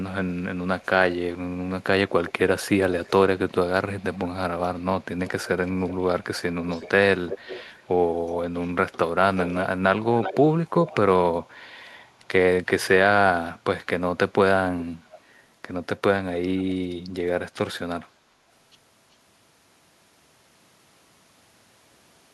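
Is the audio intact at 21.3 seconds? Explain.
Yes, at 21.3 seconds the speech is intact, with no dropout, click, distortion or other fault.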